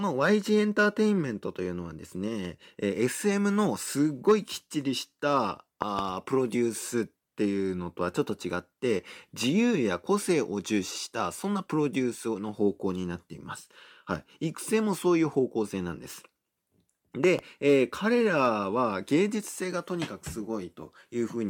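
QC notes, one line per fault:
5.82–6.01 s and 17.24–17.41 s, loud pop: a double pop, roughly 15 dB above the speech, which carries on underneath, likely from a switching or connector voltage spike.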